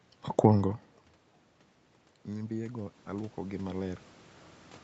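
From 2.25 s to 4.11 s the speech and the room noise behind it swell up together, slowly, over almost two seconds. This is automatic gain rising. The level reaching the microphone dropped by about 23 dB, and the automatic gain control, judging the input too quiet, raised its gain by about 8 dB step by step. Because the gain applies to everything, the background rises with the voice rather than the voice alone getting louder.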